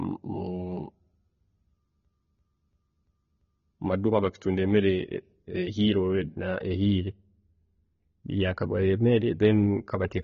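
From the start, the speech sounds dull and smeary with a fizzy, warbling edge. A spectrogram shows nothing above 7 kHz, which points to AAC compression, likely at a low bitrate.

From 2.05 to 3.76 s, a system hang loop repeats one 341 ms slice five times at 2.93 Hz, a skipping-record repeat consistent with a 16384-sample ring buffer. The waveform shows identical repeating blocks.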